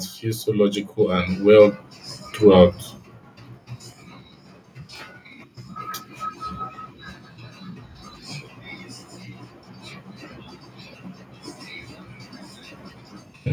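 From 0.2 s to 1.79 s the automatic gain is rising. The gain control judged the input too quiet and lifted its level by about 7 dB. Speech and background swell up together over that span.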